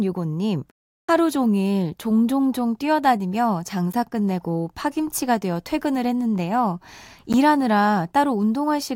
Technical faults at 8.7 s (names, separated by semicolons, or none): none